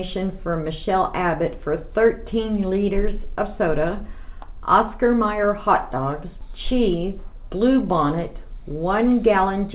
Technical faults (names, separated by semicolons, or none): none